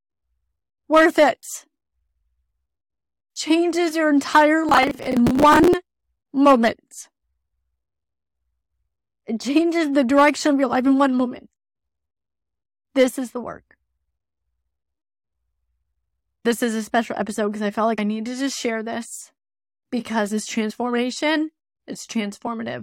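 From 4.69 to 5.74 s the speech is overlaid with processor overload crackle, a gritty tearing texture that stops abruptly once the load clears. The processor missed dozens of deadlines for short buffers, around 10 ms each. Every miss replayed a scrap of old audio with hard edges. Unlike a single dropout or one isolated click, it is a dense, continuous run of tiny discontinuities riding on top of the speech.

Later, compressed frames are skipped at 17.97 s, 20.69 to 20.71 s and 22.46 s. Each time, the speech jumps forward slightly, by roughly 50 ms at the first two points and about 20 ms at the last. These jumps fit whole frames of about 23 ms being dropped.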